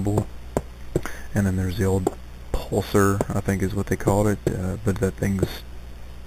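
The whole clip carries imaging from sample-and-hold upsampling. The audio started at 8 kHz and was brought up to 44.1 kHz by simply repeating each sample, with no smoothing filter afterwards. That lets mirrored copies of the spectrum through: the first image sits between 4 kHz and 8 kHz at about 20 dB below the signal, and because 44.1 kHz isn't a whole multiple of 8 kHz, the repeats are uneven and scatter further images into the original band. You hear it as a metallic fizz that rises and falls with the sound.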